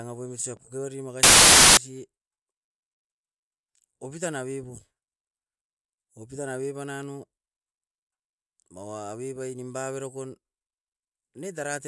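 At 1.23–1.77 s, after "poimit usa pokibari", file tags played as audio: compressed picture bytes read as samples give very loud white noise, a hard-edged block across the spectrogram.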